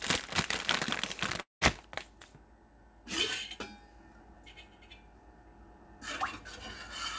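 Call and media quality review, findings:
Audio smears into a fading buzz at 1.41 s, drops to near-silence, resumes at 1.62 s with about 0.21 s gone. Likely long network dropout: packets lost, receiver concealment extends last sound then mutes; G.722 call path, content capped at 8 kHz.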